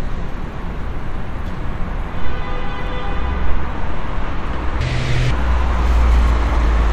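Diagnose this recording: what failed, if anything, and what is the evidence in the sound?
From 4.81 s to 5.31 s the sound suddenly races at twice its normal speed and jumps a full octave (12 semitones) higher. This is audio read two samples at a time (double speed), a sample-format conversion fault: for that half-second the reader treated each pair of samples as a single frame, as if the stream were stereo or twice as wide. It consumed the data twice as fast.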